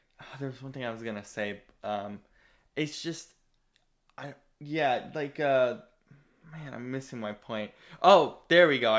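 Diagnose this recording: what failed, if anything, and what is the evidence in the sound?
Nothing failed in this recording, and the sound carries no evidence of any fault.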